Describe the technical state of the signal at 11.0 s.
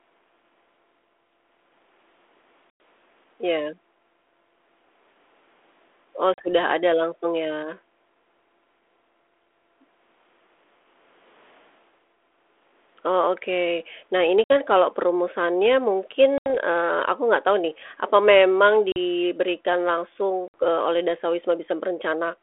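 At 11.0 s the signal is intact, with no fault present, and the sound is carried as usual through the 32 kbit/s G.726 ADPCM telephone path and its 300 Hz to 3.5 kHz band.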